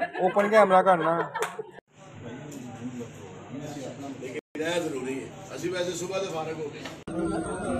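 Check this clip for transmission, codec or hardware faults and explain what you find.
One fault stands out: a Bluetooth stall from 4.39 to 4.55 s, where the sound cuts to about 160 ms of complete silence and then carries on. The likely cause is radio interference delaying packets so the receiver's buffer emptied and playback waited for retransmissions. It differs from ordinary packet loss, which leaves short clicks, warbles or smeared concealment. Here the gap is clean, dead silence with no filler, and the audio resumes rather than glitching through.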